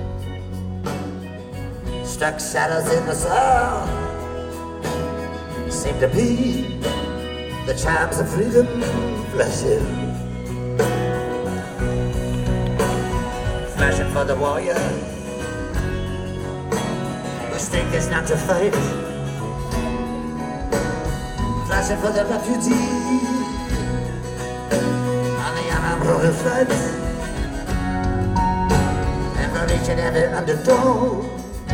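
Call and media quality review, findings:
Nothing to flag here; listened all the way along and found no faults worth raising in the ticket.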